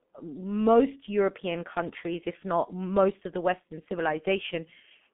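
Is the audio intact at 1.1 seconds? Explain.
No. At 1.1 s, as throughout, the speech carries heavy G.723.1 codec damage: a 200 Hz to 3.5 kHz band and a slowly updated voice model, consistent with roughly 6 kbit/s, leave it muffled, hoarse and smeared at consonants. Plain band-limiting would dull the speech without that rasp.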